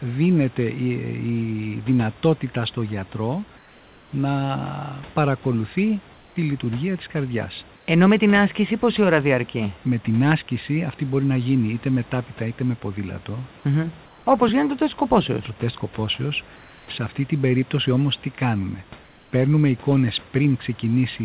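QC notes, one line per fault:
3.58–4.12 s, 6.14–6.36 s, 7.76–7.88 s, 14.06–14.26 s, 16.56–16.88 s: comfort noise in place of the background. The pauses after "δυνατότητα στο γιατρό" and before "λειτουργία της καρδιάς" turn flat and about 2–4 dB quieter, likely discontinuous transmission. The spectrogram shows smooth, textureless bands below 4 kHz, and the waveform shows steady low-level fill.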